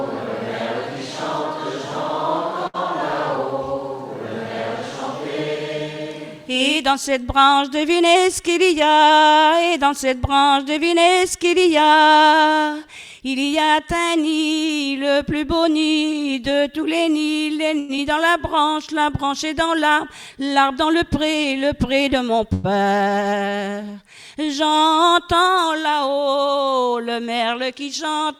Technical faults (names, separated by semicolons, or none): short stall from a late packet; jitter buffer speed-up; short concealed packet loss; call audio freeze